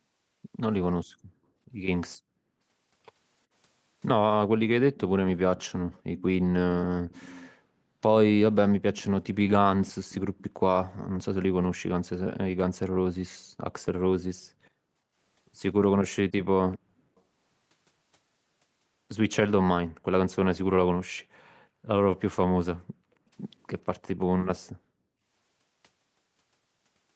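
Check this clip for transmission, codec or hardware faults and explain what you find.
Yes, there are two kinds of fault in this speech clip: an echo leak in three places and brief gating of the background by the echo canceller in three others. The top end stops at about 8 kHz, as expected on this call path.

Echo leak appears from 4.95 to 7.51 s, 8.95 to 10.96 s and 16.74 to 17.21 s. A faint delayed copy of the voice trails the original by about 0.4 s (405 ms in the first two, 392 ms in the third). It sits about 25 dB, 20 dB and 35 dB below the speech. The likely cause is a far end on loudspeaker whose echo canceller let part of its microphone pickup return. A fixed lag and a distinct second copy set it apart from room reverberation, which smears into a smooth tail.

Background gated by the echo canceller occurs at 13.39 to 13.59 s, 22.74 to 23.12 s and 25.01 to 25.17 s. Each time, the room sound falls away sharply, by about 29 dB, 32 dB and 35 dB at the deepest point, for roughly 0.2 s, 0.3 s and 0.15 s. 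The echo canceller cut the microphone gain hard while the loudspeaker played, then released it. Unlike a packet-loss dropout, the gap shows no clicks, warbling or concealment artefacts. The ambience simply ducks and returns.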